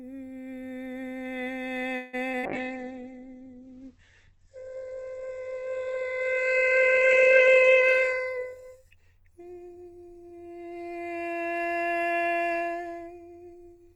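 A music recording carried over a call link shows four kinds of fault. From 1.95 to 2.15 s there is a call audio freeze: the last sound is stretched into a fading buzz for about 178 ms, and the music then resumes exactly where it stopped. Nothing is skipped, but the whole remainder now runs about 178 ms later than before. The likely cause is packets stalling in transit until the jitter buffer ran dry. Short concealed packet loss follows at 2.31 s and again from 2.39 to 2.45 s. In each case a gap of about 20 ms and then about 40 ms never reached the decoder, so the receiver bridged it by extending the preceding sound and cross-fading back into the real signal. Each heals quickly but is heard as a brief smear or wobble. A call bitrate drop runs from 2.46 to 11.33 s. The texture turns coarse and watery, and the top end collapses as the audio bandwidth narrows from 20 kHz to 8 kHz, which fits the encoder being pushed from around 48 kbps down to about 9 kbps after the bandwidth estimate fell. 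It sits at its worst for roughly 4.9 s before recovering. Inside that stretch, from 7.46 to 8.41 s, a jitter buffer speed-up makes the music hurry at unchanged pitch, running at about 114% speed as the receiver repeatedly drops pitch-period-sized slices, around 150 ms in total, to work off the excess delay it had built up. The tempo is audibly uneven through that second.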